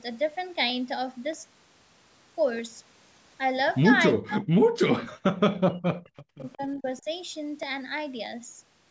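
From 0.70 s to 8.89 s, a click recurs every 0.63 s. These are clock drift buffer slips, likely from two clocks differing by roughly 500 parts per million.

From 4.16 s to 6.05 s, the speech dips by up to about 40 dB. This is speech suppressed in double talk, likely because the echo canceller turned down both sides.

At 5.04 to 5.10 s, a faint repeat arrives 361 ms late, about 20 dB below the speech. This is echo leak, likely loudspeaker sound the canceller missed. A weaker trace recurs at 6.17 to 6.23 s, about 35 dB down.

The suppression returns at 6.23 to 6.60 s, again dropping by up to about 40 dB. Shorter, shallower dips follow at 6.78 to 6.84 s and 7.01 to 7.07 s.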